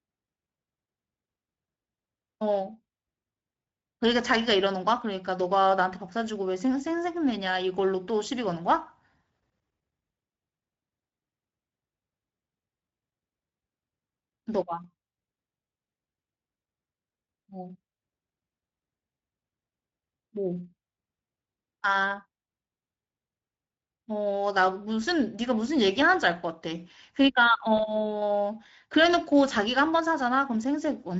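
A speech recording carrying Speex codec damage from start to finish. The voice sounds noisy and hoarse. The upper band lacks real detail and is filled with shaped hiss. The CELP coder has too few bits for its excitation, which is consistent with a mid-range rate near 17 kbps. At 27.77 s there is a short VoIP packet loss concealed by the speech codec, lasting to about 27.84 s. The gap sounds like a single 20 ms frame. The decoder repeats its last pitch and filter and fades the gain. A brief stretched, fading sound results. The voice stays weak or distorted for tens of milliseconds after the loss, because each new frame builds on the damaged one.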